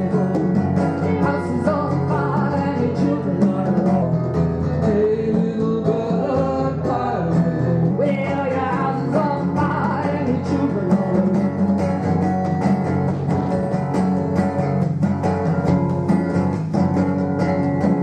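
From 4.02 s to 7.91 s there is a section at the wrong speed. The passage runs at about 0.89 times its proper rate, so it drags and its pitch drops by roughly two semitones, with tempo and pitch shifting together at the boundaries. That coupling points to a likely cause: the segment was resampled or played against a mismatched clock rather than time-stretched, which would have changed duration without altering pitch.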